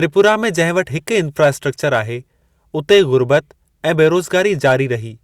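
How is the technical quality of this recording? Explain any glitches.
The recording has repeated hard clipping on its louder passages. It occurs at 0.19 to 0.80 s, 1.43 to 1.48 s, 1.94 to 1.99 s, 2.91 to 3.37 s and 4.00 to 4.72 s. The speech peaks run about 2 to 3 dB past what the recording chain could pass, and about 5 dB in the last stretch. The waveform tops are sliced flat, which adds high harmonics. This is heard as crackle on the peaks, worst near the end.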